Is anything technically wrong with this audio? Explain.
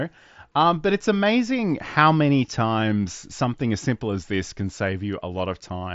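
No, nothing is technically wrong with this audio.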